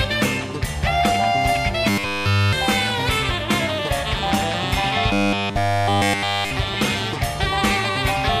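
From 1.90 to 2.53 s, and again from 5.13 to 6.52 s, the sound collapses into a rigid, metallic buzz at 100 Hz: robotic sound from repeated short buffers. The likely cause is audio arriving too seldom, so a segment of about 10 ms is looped to fill the gap, with essentially none of the real signal getting through. Unlike a dropout or stutter, there is no silence or audible jump, just a steady pitch locked to the loop length.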